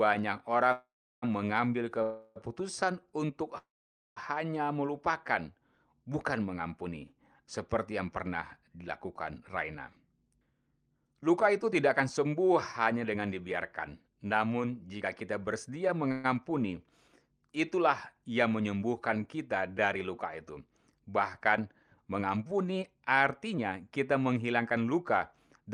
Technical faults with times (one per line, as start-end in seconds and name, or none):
0.72-1.24 call audio freeze
2.02-2.38 call audio freeze
3.58-4.18 call audio freeze
9.88-12.27 jitter buffer speed-up
16.12-16.26 call audio freeze
21.49-25.70 jitter buffer speed-up